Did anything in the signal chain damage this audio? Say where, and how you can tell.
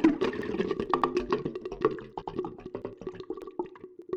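Yes. Overlapping chunks at the buffer stage: a 100 ms stutter repeats at 0.42, 1.02, 1.62, 2.22, 2.82, 3.42 and 4.02 s. The audio was cut into 0.5 s blocks, and each block restarts 100 ms early, so the sound before every join plays twice, every 0.6 s.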